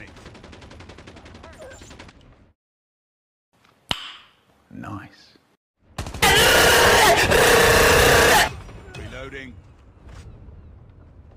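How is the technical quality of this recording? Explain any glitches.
No glitches can be heard anywhere in the recording, and the signal stays continuous and stable throughout.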